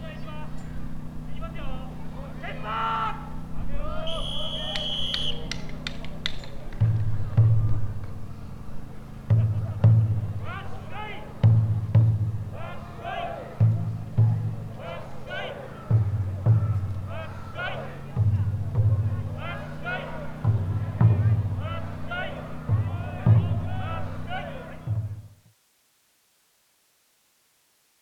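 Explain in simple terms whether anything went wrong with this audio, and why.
Nothing went wrong; it fades out around 24–25.6 seconds.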